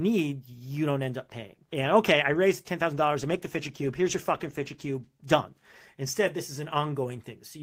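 From 3.22 to 5.17 s the speech turns rough and watery, then clears. This is a call bitrate drop: the encoder's rate fell from 32 to 16 kbps for about 1.9 s, so it coded the sound more coarsely until the bitrate recovered.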